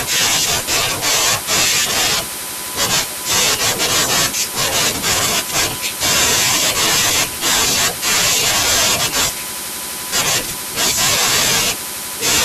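A speech clip with USB whine: the bus's 1 ms frame current leaks into the audio path, leaving a fixed 1 kHz tone roughly 20 dB below the speech throughout.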